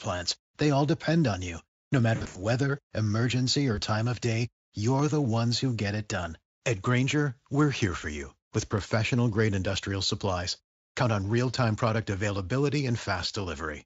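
A speech recording in which the sound turns buzzy and smeared, then fades weak, from 2.15 to 2.41 s, and again briefly at 3.75 to 3.79 s just before "time of day". This is VoIP packet loss concealed by the speech codec. In the first burst about 160 ms of frames go missing across 200 ms, with the longest gap 80 ms. At 3.75 s a single 20 ms frame is lost. Each time the decoder stretches its last pitch and filter while lowering the gain. Two isolated sharp clicks follow, at 4.99 s between "time of day" and "the ones who get", and at 8.78 s between "here for you with" and "grade industrial supplies". Each is likely dropped samples, a fraction of a millisecond missing so the waveform jumps abruptly.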